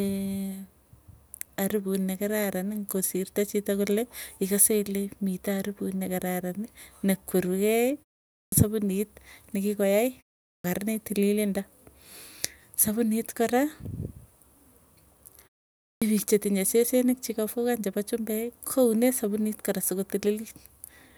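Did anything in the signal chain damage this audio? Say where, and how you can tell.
Yes: clipped start after a pause at 8.45 s, 10.56 s and 15.94 s (before "piik chetinye sesenik"). After silences of about 0.4 to 0.5 s, the playback device sleeps and takes 72 to 83 ms to wake, so each onset arrives abruptly, its first sounds missing.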